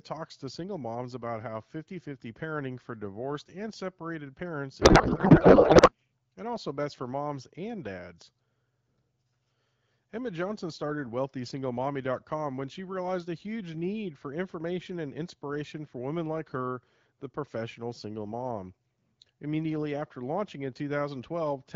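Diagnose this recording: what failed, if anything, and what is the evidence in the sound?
At the codec stage, a codec payload misread occurred: the receiving AMR decoder unpacked frames using a different bit layout from the sender's, which fits octet-aligned frames being read as bandwidth-efficient. Every field lands in the wrong place, yet the frames still decode as valid. After "divorced and separated parents", from 4.81 to 5.93 s, the speech gives way to garbled noise and warble that barely tracks it. Clear AMR wideband speech returns at "and also best for", once both sides agree on the packing again.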